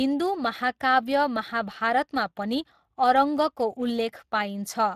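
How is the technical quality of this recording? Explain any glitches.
The quality is limited by Speex codec damage that runs through the whole speech clip. CELP coding with few excitation bits leaves the speech noisy and hoarse, with a grainy edge that fits a rate around 22 kbps. On a spectrogram the harmonics look smeared and fuzzy, and the top is cut off cleanly at 15.3 kHz.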